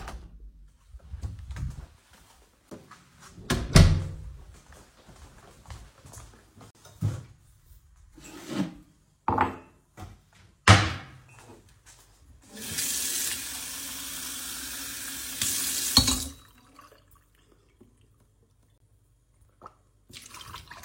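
At 2.70 s, 6.71 to 6.75 s and 18.78 to 18.80 s you get a gap between stream segments: the segment timestamps, on a 4-second grid, don't quite meet, so the player pads the hole with silence. That gives hard-edged dropouts of about 15, 43 and 26 ms, with nothing actually lost.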